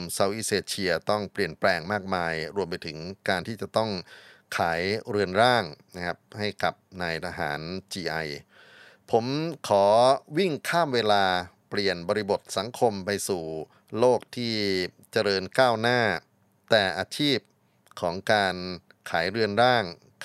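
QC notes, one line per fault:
No faults found in this speech clip. Nothing in the recording calls for a timed entry.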